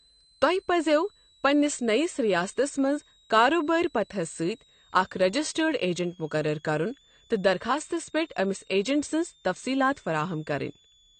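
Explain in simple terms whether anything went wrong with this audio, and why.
Switching supply whistle, present from start to finish: a steady high whistle sits quietly under the speech, with its pitch moving between about 3.3 and 4.1 kHz. It comes from a switching power supply running in an audible burst mode or beating against another supply.

AAC compression, also throughout: the sound is plainly damaged by coding, and nothing is left above about 8.5 kHz, so the top end is missing. This is likely AAC-LC squeezed hard, which cuts off high frequencies to save data.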